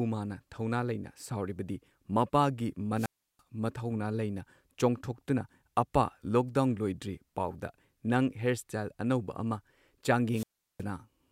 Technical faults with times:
2.95-3.41 wireless microphone squelch dropout
10.32-10.83 wireless microphone squelch dropout

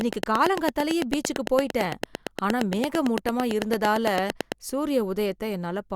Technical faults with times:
0.01-4.53 train of clicks

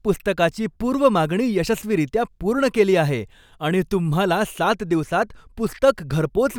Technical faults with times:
4.56-5.56 channel delay (comb filtering)

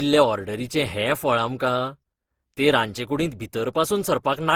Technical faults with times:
0.00-4.56 generation loss

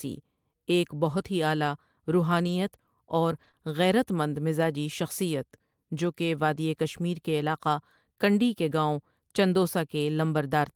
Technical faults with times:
2.43-2.49 lost packet rebuilt from error correction
3.35-3.49 lost packet rebuilt from error correction
3.51-3.55 short concealed packet loss

